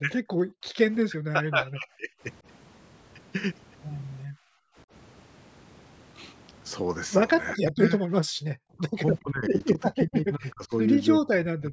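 Speech suppressed in double talk runs at 0.01 to 0.21 s, 1.06 to 2.1 s, 7.53 to 8.05 s, 8.78 to 10.88 s and 11.21 s to the end. The voice dips by as much as roughly 40 dB or breaks into pieces, likely because the echo canceller mistook overlapping talk for echo. The waveform shows notched, chopped envelopes and the spectrogram shows thinned or missing bands. Background gated by the echo canceller drops the room sound by about 40 dB at 0.43 to 0.74 s, about 28 dB at 4.25 to 4.76 s and about 33 dB at 8.33 to 8.5 s. On the waveform these are flat near-silent gaps, and the spectrogram shows dark vertical stripes below the 8 kHz ceiling of the call processing.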